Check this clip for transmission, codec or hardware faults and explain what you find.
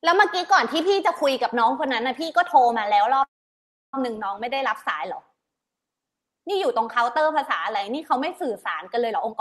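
Two transmission faults are audible in the speech, both tied to packet delivery on the call path, which carries Opus-style coding noise with the top end stopping near 12 kHz, consistent with a bitrate around 32 kbps.

From 3.23 to 3.94 s there is a call audio freeze, likely caused by packets being held up until the jitter buffer ran empty. The receiver filled about 0.7 s, mostly silence for 0.66 s. Playback then resumes where it stopped, so nothing is lost, only a gap is inserted.

From 9.06 s to the end there is a jitter buffer speed-up. Holding excess delay, the receiver repeatedly cut out pitch-period-sized pieces, roughly 0.2 s in total. The speech plays at 156% speed with unchanged pitch and sounds rushed.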